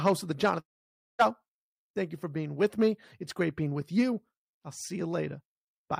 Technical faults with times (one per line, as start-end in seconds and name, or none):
0.59-1.21 long network dropout